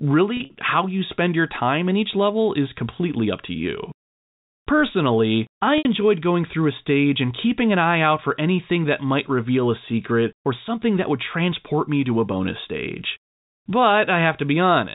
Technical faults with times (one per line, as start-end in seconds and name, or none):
0.37-0.55 packet loss with pitch repetition
5.78-5.85 packet loss with pitch repetition